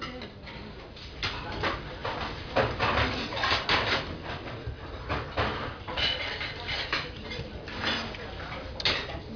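No technical fault can be heard anywhere in this recording of sounds.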